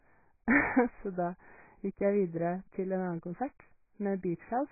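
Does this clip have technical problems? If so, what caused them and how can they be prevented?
Yes. Throughout the speech, nothing survives above about 2.5 kHz, so it sounds dull and muffled. Sibilants turn smeared and fizzy. This is likely AAC compression at a very low bitrate. The encoder lowered its cut-off and starved the remaining bands. Encode at a higher bitrate to prevent it.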